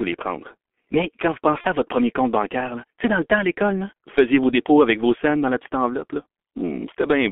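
Throughout, the G.723.1 codec narrows the sound to a telephone band of about 250 Hz to 3.4 kHz. Heavy coding damage, consistent with a 6.3 kbit/s mode, leaves the speech muffled and hoarse, with smeared consonants from the codec's coarse 30 ms frames and slowly updated voice model.

From 1.61 to 1.67 s, between "quand vous" and "à votre premier compte", VoIP packet loss is concealed by the speech codec. A 30 ms gap, which fits one lost frame, is filled by extrapolating the previous pitch and filter, producing a brief stretched, fading sound before normal decoding recovers.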